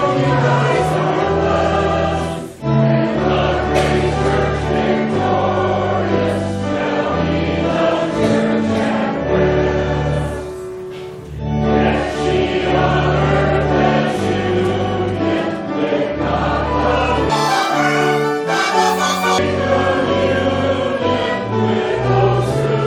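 From 17.30 to 19.38 s, a section at the wrong speed plays at twice its recorded rate. The sound jumps abruptly high and hurried, its pitch raised by around ten semitones, and rhythm and timing are compressed together with pitch. At 19.38 s normal speed returns just as suddenly. The likely cause is that this stretch was clocked at the wrong rate during editing or playback, which shifts speed and pitch in step.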